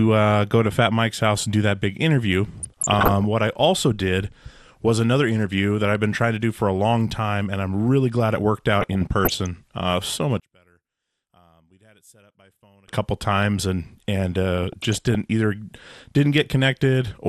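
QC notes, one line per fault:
Throughout, MP2 compression: the speech sounds dull and plainly gurgly and granular, with the top end coming and going. That's likely a low-rate MP2 encode, around 80 kbps by the sound of it, starving the upper sub-bands of bits and coarsely quantising the rest.
2.57–3.25 s, 8.79–9.46 s, 14.58–15.15 s, DAB burbling: three bursts of burbling over the speech. The first runs from "do that big interview" to "what I also did", and the second comes right after "really glad it worked". Bit errors, roughly a few tenths of a percent, got past error correction and put short blips of noise into individual sub-bands.
10.40–12.88 s, one channel inverted: the speech nearly disappears, dropping about 34 dB to a faint residue until it comes back for "couple times". The likely cause is one stereo channel flipped in polarity, so the shared centre content cancels when summed to mono.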